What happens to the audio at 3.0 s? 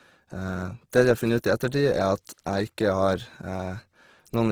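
At 3.0 s the speech carries the grainy, rough texture of Opus compression, present throughout, likely from CELT-mode coding at a low rate near 16 kbps that fills starved bands with noise. A spectrogram shows speckled, noisy bands extending to about 20.4 kHz without clear holes.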